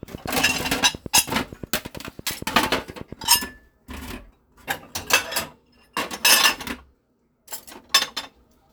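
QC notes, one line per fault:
0.03–3.37 s: train of clicks, about 30 evenly spaced pulses at 8.7 per second peaking about 5 dB above the sound, likely interference from nearby equipment or a faulty connection or power supply.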